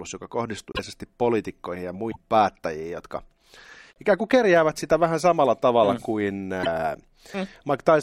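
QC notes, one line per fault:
0.72–0.79 s, broken MP3 bit reservoir: a roughly 70 ms glitch just before "poliitikkoihin ja", with the audio jumping ahead across it. This is likely a lost stretch of MP3 frames, each about 26.1 ms. The frame after the gap reaches back into the reservoir for data that belonged to a missing frame, so it decodes someone else's bytes. About two to three frames come out as a chirp or noise rather than signal before decoding recovers.
2.10–2.16 s, broken MP3 bit reservoir: a roughly 60 ms glitch between "poliitikkoihin ja" and "päättäjiin jotka", where the audio skips forward. The same mechanism applies. A likely dropout of frames leaves the next 26.1 ms frames pointing back into reservoir space that now holds unrelated data. For a little over two frame lengths the decoder turns that mismatch into a short chirp or noise burst until it finds a frame that is self-contained again.
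3.91–3.97 s, broken MP3 bit reservoir: a roughly 65 ms disturbance with a jump in the audio's continuity. This fits the likely loss of frames upstream. Once the stream resumes, the first 26.1 ms frames borrow reservoir bits from frames that no longer exist and decode the wrong bytes, which is heard as a brief chirp or noisy hole about two and a half frames long.
6.62–6.67 s, broken MP3 bit reservoir: a roughly 40 ms glitch right after "samalla tavalla mm kuin", where the audio jumps ahead. This is the shortest of the four, about one and a half 26.1 ms frames. After a likely cut in the frame sequence, the resumed frame's back-reference into the bit reservoir lands on foreign data, so it decodes as a short chirp, burst of noise or hole before clean frames take over.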